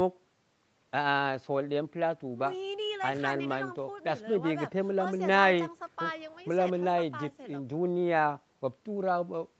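No technical faults can be heard in this speech.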